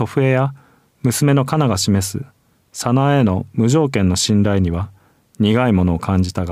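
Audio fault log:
No technical fault can be heard anywhere in this speech recording. There is nothing to log for it.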